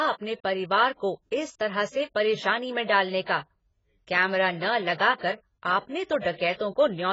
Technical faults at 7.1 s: AAC compression

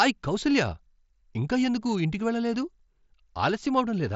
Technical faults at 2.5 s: none

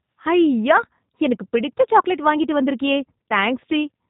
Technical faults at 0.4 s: G.729 codec

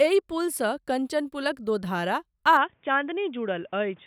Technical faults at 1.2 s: none

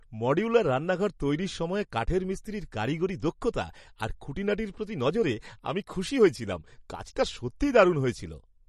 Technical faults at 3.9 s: MP3 compression

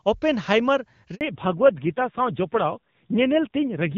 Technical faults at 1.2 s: handover gap; fallback to narrowband

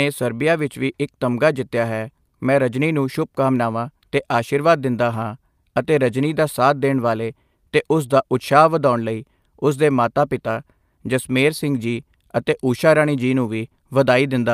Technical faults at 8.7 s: none

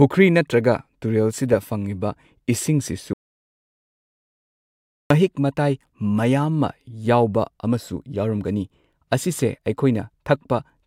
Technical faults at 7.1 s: none

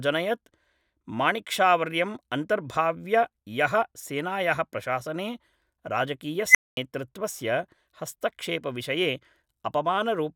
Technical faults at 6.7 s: unstable filter

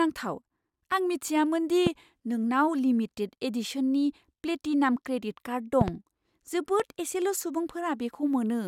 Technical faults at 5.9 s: loud pop

